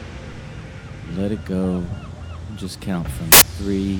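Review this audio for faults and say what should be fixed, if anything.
From 3.32 to 3.42 s there's a corrupt FLAC frame: flipped bits throw off the predictor, giving an error peaking near about -1 dBFS, seemingly one frame. Fix it by verifying frame checksums on decode and re-fetching or muting any frame that fails.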